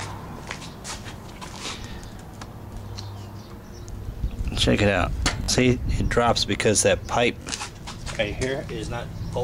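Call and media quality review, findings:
Repeated buffer: short stutters at 1.56, 3.37, 5.44 and 7.42 s. Playback underrun re-plays the last 21 ms chunk, which fits a 1024-sample buffer. The last two double-repeat.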